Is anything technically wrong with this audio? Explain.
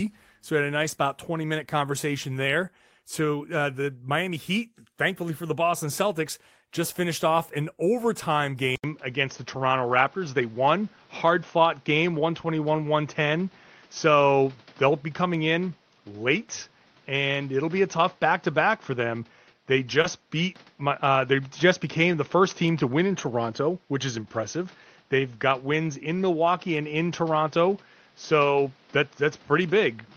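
Yes. Just after "so we had a", from 0.83 to 0.93 s, there is a lost packet rebuilt from error correction. Three packets went missing, and each following packet carried a low-bitrate copy of its predecessor. The decoder played those copies, about 60 ms in all, so nothing drops out, but the stretch sounds rougher and grainier. On a spectrogram it shows as a smeared, noisier patch. At 20.04 s a single 20 ms packet is rebuilt the same way.

There is also short concealed packet loss. From 0.95 to 0.99 s, 20 ms never arrived, and the decoder filled 17 ms of it by extending the preceding sound before blending back. The same happens from 20.02 to 20.06 s, with 19 ms filled. Each is heard as a brief smear or wobble.

From 8.76 s to the end, after "finished off an overtime", the input switched to a poorer device. The likely cause is a change of microphone or a headset call profile. There is an 80 ms silence at the switch. 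After it the level shifts by about 5 dB, the noise floor sits only about 35 dB under the signal, and nothing remains above 6.4 kHz. The sound turns duller and boxier, and a spectrogram shows a hard ceiling across the rest of the clip.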